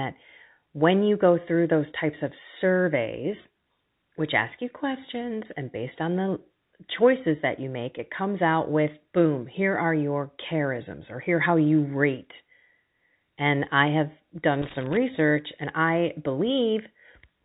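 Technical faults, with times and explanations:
14.62–14.97 s, loose connector crackle: a worn or dirty contact in the signal path lost and regained connection repeatedly for about 0.35 s, chopping the speech into fragments, and any DC sitting on the line turned each break into a pop. The result is an uneven burst of scratchy crackle riding over the audio, with the band already capped near 4 kHz by the G.711 telephone coding carrying the call.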